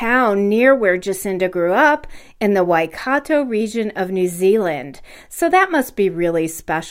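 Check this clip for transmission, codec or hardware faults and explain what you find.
Nothing faulty turns up anywhere in this speech recording.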